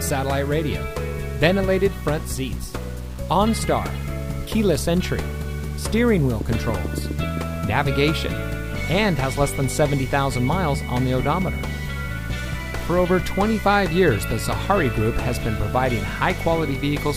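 Throughout, low bit depth without dither gives grainy distortion that tracks the sound, with error about 25 dB below the signal. This most likely comes from 7-bit truncation.

From 6.41 to 7.70 s, a train of clicks brings about ten unevenly spaced pops, around 8.6 per second, peaking roughly 10 dB above the signal. Interference is the likely source.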